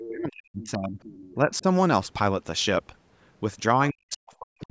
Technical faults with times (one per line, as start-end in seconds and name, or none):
0.00-0.08 other side's voice leaking through
0.08-0.99 speech suppressed in double talk
0.62-0.67 other side's voice leaking through
1.03-1.35 other side's voice leaking through
1.35-1.65 speech suppressed in double talk
3.90-4.70 speech suppressed in double talk